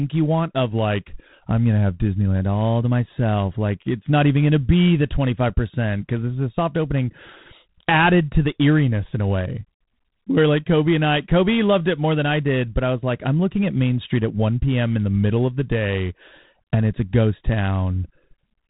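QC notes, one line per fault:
Throughout: G.726 ADPCM. The speech is coded as a few bits per sample of difference from an adaptive prediction, and at 24 kbit/s that leaves only three bits for each sample. The quantisation error is plainly audible as a harsh, rasping hiss that rises and falls with the speech level, because the step size adapts to the signal. Nothing above 3.9 kHz survives, so the top end is cut off flat and sibilants lose their edge.
0.71 to 2.40 s: drift correction step. Playback drops about 5.2% in speed for roughly 1.7 s, and pitch falls with it by 93 cents, just under a semitone. The speech sounds abruptly detuned and dragged, then snaps back to normal rate and pitch at 2.40 s. Speed and pitch moving together, in one step and for a bounded stretch, points to a clock-matching stage that likely changed its resampling ratio at once to refill its buffer.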